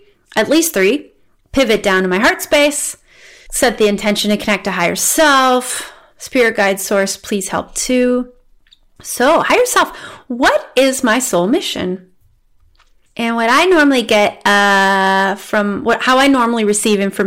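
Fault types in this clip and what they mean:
Hard clipping: The speech is driven about 12 dB beyond what the signal path can pass. Its peaks are cut flat. A few percent of samples hit that ceiling. The flat tops add high harmonics, so loud syllables carry a harsh fuzz throughout.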